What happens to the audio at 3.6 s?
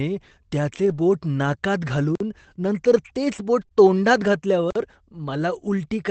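Right around 3.61 to 3.63 s there's a lost packet rebuilt from error correction. One 20 ms packet went missing, but the next packet carried a low-bitrate backup of it, which is how Opus in-band FEC works on this 24 kbps call. The decoder played that backup, so there's no hole, just a brief patch where the sound turns a bit coarser and hissier than what's around it.

Right after that come two short concealed packet losses, at 3.65 to 3.69 s and then 3.69 to 3.86 s, each missing 20 ms. This time there was no backup, so the receiver improvised, stretching the last bit of sound forward, about 16 ms of fill for the first and 10 ms for the second, then easing back into the real signal. You hear it as a quick smear or wobble, and the second one also adds a touch of extra delay, roughly 15 ms.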